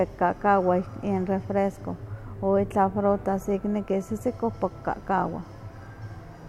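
No technical faults can be heard in this recording.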